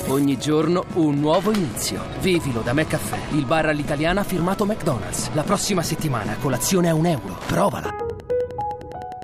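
A Wi-Fi radio sitting close to the audio circuitry is coupling its transmissions into the signal path, where they are rectified into audible clicks. This Wi-Fi interference runs for the whole clip. The radio's beacon repeats every 102.4 ms, so the result is a steady, mechanical ticking at just under ten per second. It sits roughly 20 dB below the wanted sound.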